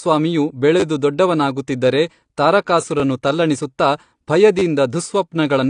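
From start to finish the speech sounds dull and swirly, with nothing above 9.8 kHz, even though the file is a high-bitrate MP3. This is likely low-bitrate audio saved at a high bitrate: the speech appears to have passed through a low-rate codec first, something like AAC at around 32 kbit/s, which stripped the top end and left its smearing. Re-encoding at a generous rate only preserved that damage faithfully and could not bring back what was removed.

At 0.8 s a brief buzzy stutter runs to 0.83 s. This is a repeated buffer: fresh audio was late, so the playback device replayed the same 10 ms block three extra times, each repeat joined hard to the last. Because the block is so short, the three repeats fuse into a rough burr rather than an audible echo, and the speech then carries on with nothing apparently skipped. The same fault returns from 4.59 to 4.62 s, again a 10 ms piece played three extra times, heard as another short buzz.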